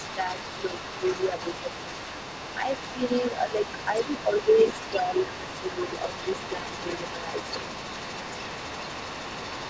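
From the very start to the end, a faint second voice sits under the speech, roughly 15 dB below it: other side's voice leaking through. It's likely the loudspeaker's playback getting back into the mic because the echo canceller didn't fully strip it out.

From 0.16 to 1.93 s, and again from 2.58 to 5.79 s, the main talker dips in pieces by up to about 10 dB, for around half a second in the first stretch and about a second and a half in the second. That's speech suppressed in double talk, likely the canceller ducking everything while both sides were talking at once.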